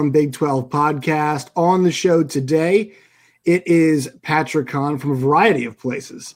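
Nothing goes wrong anywhere in this bit of speech, so there's no fault to point to at any moment.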